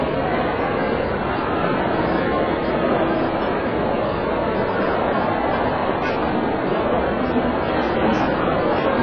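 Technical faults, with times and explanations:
Throughout, AAC compression: sound stops dead above 6.5 kHz, dull and smeared with a fizzy warble, likely AAC-LC quantising coarsely at a very low bitrate, near 12 kbps.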